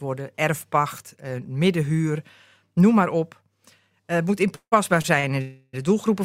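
At 4.55 s the sound halts in a call audio freeze lasting until 4.74 s. The last sound carries on as a fading buzz for a moment, then about 90 ms of silence sets in before playback resumes exactly where it left off. Nothing is skipped, but about 164 ms of delay has been added, likely because packets were held up in transit and the jitter buffer drained. The fade into true silence is what separates it from the shorter stalls that follow.

Two short stalls from a late packet come next, at 5.02 to 5.06 s and 5.20 to 5.25 s. In each, the current sound is simply held a little too long, by about 20 ms and then about 35 ms, with a faint buzzy dip. The receiver stretched it while waiting for one overdue packet. Nothing goes silent.

A second call audio freeze runs from 5.41 to 5.75 s. This time the held sound is drawn out as a buzz for the whole 318 ms and never reaches silence before the audio picks up again with nothing missing, likely the result of another run of delayed packets emptying the jitter buffer. 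Its length is what marks it as a freeze rather than a stall: it is roughly nine to sixteen times longer than the late-packet stretches.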